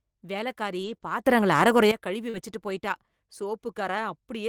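From 0.81 to 0.95 s, lost packets were rebuilt from error correction: low-bitrate copies fill the gap, so the sound turns briefly rougher and noisier. At 0.97 to 1.02 s, a short concealed packet loss covers about 20 ms by extending the preceding sound, causing a brief smear. Another error-correction rebuild follows at 1.02 to 1.12 s. From 1.26 to 1.91 s, sound and background noise rise together by about 12 dB and then drop back, likely a sudden gain jump applied without a ramp. At 2.30 to 2.35 s, a second concealed loss fills roughly 40 ms with continued sound, producing a wobble, and it overlaps a final rebuild from error correction at 2.33 to 2.43 s that again sounds coarse.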